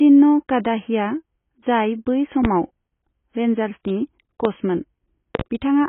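Throughout, the speech sounds dull and smeared, with nothing above 3.8 kHz and a warbling texture. This is likely heavy AAC compression at a low bitrate, around 16 kbps. Loud pops, each about 15 dB above the speech, land at 2.45 s and 4.45 s, followed by a double pop from 5.35 to 5.43 s. These are likely voltage transients, from a switch or static, added on top of the continuing signal.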